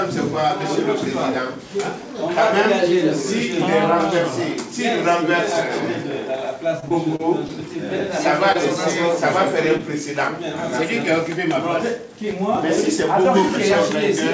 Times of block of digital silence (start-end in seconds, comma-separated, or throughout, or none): none